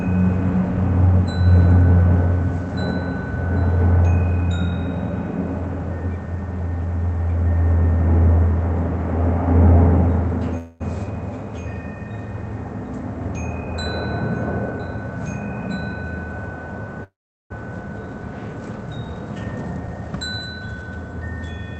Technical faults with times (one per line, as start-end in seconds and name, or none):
10.57-10.82 call audio freeze
14.60-16.04 jitter buffer speed-up
17.04-17.52 call audio freeze
19.35-20.83 jitter buffer speed-up